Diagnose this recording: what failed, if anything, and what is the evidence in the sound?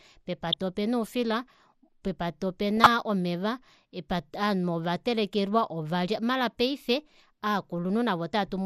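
The whole clip sounds dull and plainly gurgly, with a granular edge on the speech. That points at the codec stage, likely MP2 compression at a low rate, something that fits around 80 kbps. Short of bits, upper sub-bands switch off and the remaining bands get coarsely quantised.

DAB burbling hits twice, at 0.48 to 0.56 s and 2.77 to 2.88 s. You get brief blips of noise in individual sub-bands. That's a reception-side fault: a small fraction of a percent of bit errors slipped past error correction, scrambling samples across seven frames each time.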